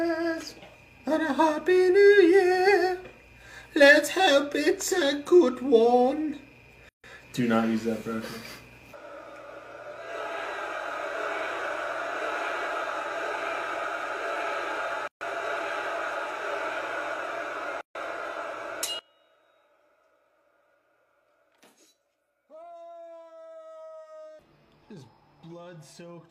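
Gaps at a join of encoded pieces open at 6.89 to 7.04 s (148 ms), 15.08 to 15.21 s (about 135 ms) and 17.81 to 17.95 s (141 ms). Each is a short silence with smeared edges, left where separately encoded sections were butted together without trimming their start delay and end padding.

From 18.99 s to the end, the sound drops by about 27 dB to a faint residue, likely from one channel being inverted so the shared content cancels in mono.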